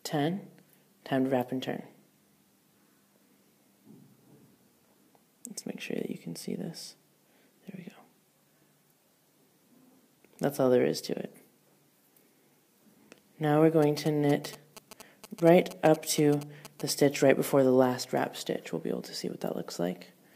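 GSM signalling bursts appear from 13.83 to 16.90 s. A nearby 2G phone sending short signalling bursts had its radio energy rectified by the audio circuit, producing a galloping run of ticks and brief 217 Hz buzzes sitting roughly 15 dB below the main sound.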